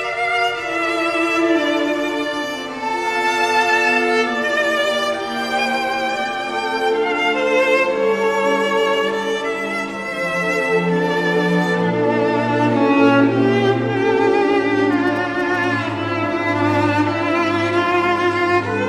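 From 14.92 to 15.65 s there are GSM signalling bursts: a nearby 2G phone's radio pulses, rectified by the audio circuit, give a galloping dit-dit-dit of short buzzes at 217 Hz, about 20 dB below the sound. Mains hum differs: it is steady, at 50 or 60 Hz.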